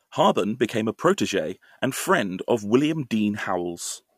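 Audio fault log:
No technical fault is audible anywhere in this speech recording.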